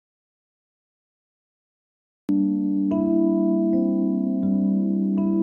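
From the very start through to about 2.29 s there's an audio dropout to silence: it's already under way when the clip opens, and that opening stretch is silent, with no room tone or hiss at all. Then the sound just snaps in mid-flow. That's most likely the input having been lost, say a device unplugged or a stray mute, while the recorder kept writing silence, so whatever happened in that gap is simply gone.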